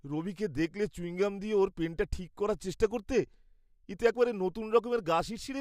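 No technical fault can be heard anywhere in this speech recording, which comes through as a continuous, intact signal.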